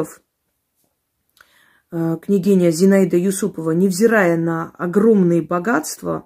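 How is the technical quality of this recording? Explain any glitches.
The recording is technically sound, with no glitches or signal-chain problems to report anywhere in the speech.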